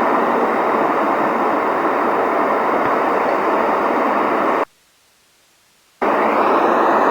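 At 4.64 s the sound cuts out abruptly and stays gone until 6.02 s, an audio dropout to a faint residue lasting about 1.38 s. Only hiss remains in the gap, roughly 40 dB below the signal, so the path after the break is likely still live while the source feed was lost. On a waveform the envelope drops to a thin noise floor with sharp edges at both ends. A spectrogram shows a broadband grey band instead of the surrounding detail.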